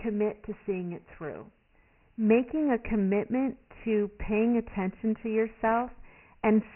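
From start to finish the speech carries Dialogic VOX ADPCM coding, heavily applied. Nothing reaches above 3 kHz, so the sound is narrow and dull, and the top end of sibilants is missing. The coder stores each sample as a 4-bit step from its prediction, and at this coarse resolution the quantisation error shows up as a gritty hiss that rises and falls with the speech. The bandwidth and grain fit the 6,000-sample, 24 kbps form of the format.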